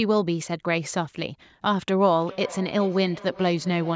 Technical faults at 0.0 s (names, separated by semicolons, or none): none